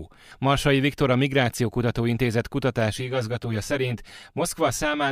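From 2.9 s to the end, the speech takes on channel delay (comb filtering): one channel runs roughly 10 ms late, and summing to mono cancels evenly spaced bands from around 50 Hz upward. It sounds hollow and phasey, with fixed dark horizontal stripes on a spectrogram.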